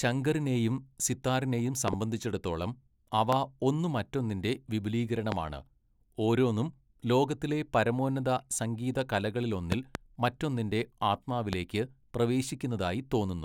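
Loud pops hit at 1.88–1.95 s as a double, 3.33 s, 5.32 s, 9.72–9.97 s as a double, and 11.53 s. Each sharp thump jumps well above the speech. The cause is likely a voltage spike.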